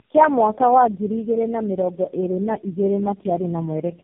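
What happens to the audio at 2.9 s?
Tandem speech coding is present at 2.9 s, as it is across the whole clip. The sound points to four low-rate speech codecs in a row, each decoding and re-coding the previous one's degraded output. The speech sounds rough, muffled and warbly, with nothing above 3.5 kHz.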